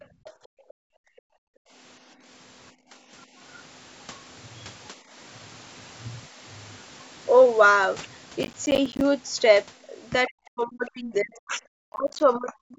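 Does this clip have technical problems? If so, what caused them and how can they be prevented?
Yes. Other side's voice leaking through appears faintly at 0.00 to 0.31 s, 0.68 to 0.74 s and 10.87 to 10.91 s, well below the talker. It is likely loudspeaker playback that the echo canceller failed to fully remove from the microphone. Using a headset or better acoustic isolation between speaker and microphone prevents this.

Background gated by the echo canceller cuts the room sound by about 40 dB from 0.06 to 1.73 s, about 15 dB from 2.73 to 3.11 s and about 9 dB from 4.97 to 5.13 s, as the canceller clamps the microphone during playback. Gentler suppression settings or comfort-noise fill would avoid these audible holes.

Processor overload crackle runs from 8.43 to 9.01 s and from 11.81 to 12.20 s. Many missed processing deadlines in a row leave short silent gaps, which fits buffers of about 10 ms, and together they sound like gritty tearing. 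Reducing CPU load or increasing buffer headroom prevents it.

Speech suppressed in double talk runs from 10.28 s to the end, with the talker's level dropping by roughly 40 dB in pieces. This is likely the echo canceller muting everything while both sides spoke at once. A canceller with proper double-talk detection, or a headset, prevents it.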